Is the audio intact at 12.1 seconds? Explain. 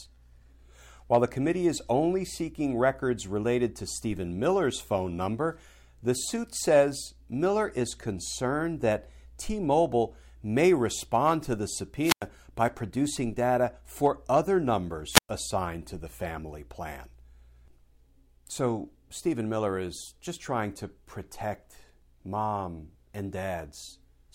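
No. A wireless microphone squelch dropout runs from 12.01 to 12.26 s: hiss rises as the radio link fades, then the receiver's squelch mutes about 97 ms, unlike a digital dropout's clean cut.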